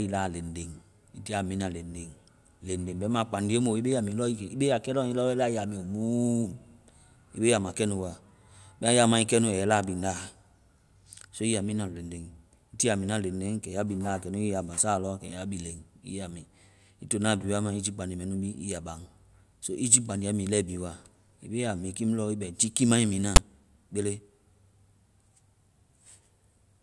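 A speech recording with one fault: file tags played as audio, at 23.36 to 23.38 s. Tag text read as samples gives a loud, one-sided rasp, then zero padding drops to silence. The hard-edged burst, not a plain dropout, marks it as misread metadata.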